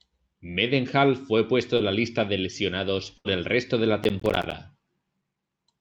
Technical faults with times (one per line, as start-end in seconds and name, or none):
1.77-1.81 short concealed packet loss
3.17-3.27 burst of packet loss
4.04-4.54 processor overload crackle